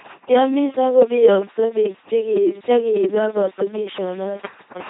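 This speech clip has passed through an LPC-10 vocoder for its whole length. Its 2.4 kbit/s rate keeps only a ten-pole vocal tract filter, excited each moment by either a pulse train or noise, so the damage is heavy. Every stretch is forced fully voiced or fully unvoiced, giving a buzzing, mechanical robot voice, with stray buzz or hiss wherever that choice goes wrong. Nothing sounds above 3.8 kHz.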